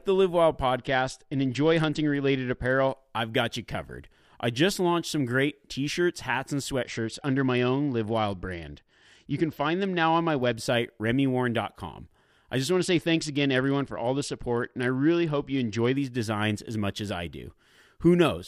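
Three times in this speech clip the Bluetooth link squeezes the SBC encoder's bit pool, a Bluetooth SBC bit pool drop, from 0.77 to 2.92 s (ending just before "I've got you covered"), from 6.83 to 10.53 s (after "t shirts hats and") and from 12.72 to 15.96 s (between "I just" and "designs as much as"). Starved of bits, the upper sub-bands lose their share, so the treble goes dull while a grainy quantisation hiss rises. The sound points to a fall from a bit pool near 31 to about 10, roughly 77 kbps.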